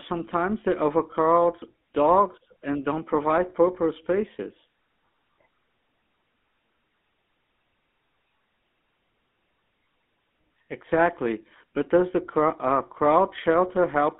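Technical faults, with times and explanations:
Throughout, GSM full-rate codec: the speech is confined to 200 Hz to 3.5 kHz with a plainly buzzy, gravelly roughness. That fits a 13 kbps GSM coder rebuilding the voice from a vocal-tract model and sparse pulses. A spectrogram shows a hard ceiling near 3.5 kHz and grainy harmonics.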